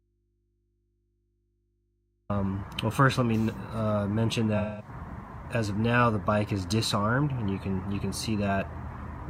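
An audio dropout to a faint residue is already under way when the clip begins and lasts until 2.30 s. For that stretch the wanted sound is missing, and only a low mains hum remains, about 45 dB below the normal level. Then the signal returns abruptly rather than fading in. The likely cause is a break in the signal feed while the input stage stayed live, so its open input picked up hum in the gap.

AAC frame loss with concealment follows from 4.57 to 4.89 s, with about 0.21 s of audio lost, which fits roughly five lost frames. With no data for that span, the decoder rebuilt the audio from the last good spectrum, reusing its energy with scrambled phase. The result is a short smeared, noisy or phasey patch where the sound loses its definition before clean decoding resumes.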